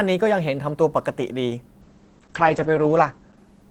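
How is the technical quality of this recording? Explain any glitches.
The clip has one glitch: from 1.82 s to the end, the speech turns rough and muffled. This is a call bitrate drop. The encoder's rate collapsed, consistent with a fall from about 32 to 9 kbps, coarsening the coding for roughly 1.1 s at its worst and narrowing the bandwidth from 20 kHz to 8 kHz, which dulls the top end.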